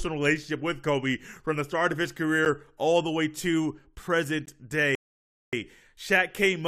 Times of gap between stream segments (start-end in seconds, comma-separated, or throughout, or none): 2.45, 4.46